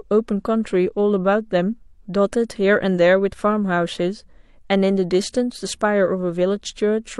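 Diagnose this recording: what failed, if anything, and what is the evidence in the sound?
Nothing failed in this recording.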